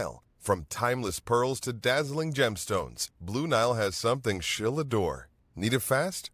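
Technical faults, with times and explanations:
No technical faults heard in the speech; nothing to log.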